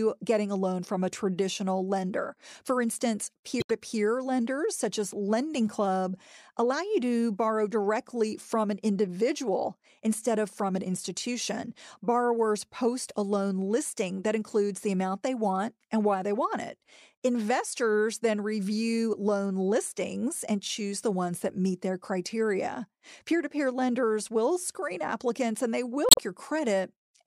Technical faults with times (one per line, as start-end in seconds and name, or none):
3.59-3.70 damaged data in a compressed stream
26.08-26.19 damaged data in a compressed stream